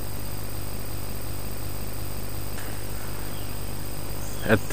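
From 0.79 s to 2.58 s a broken-record loop repeats one 359 ms fragment five times, back to back and identical. Unlike an echo, nothing decays or overlaps. A stalled player or stream likely kept resending its last buffer, losing the audio meant for that span.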